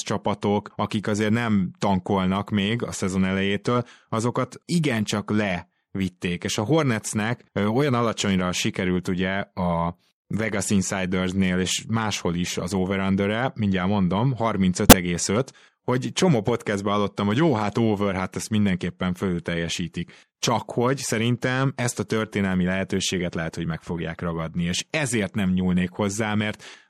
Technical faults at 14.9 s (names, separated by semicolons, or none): MP3 compression; corrupt frame decoded